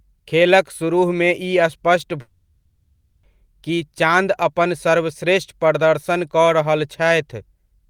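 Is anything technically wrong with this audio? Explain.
Yes. From 2.21 to 3.25 s the speech turns into a fading buzzy smear before resuming at "कि चाँद अपन", with about a second lost. This is likely a long network dropout filled by receiver concealment.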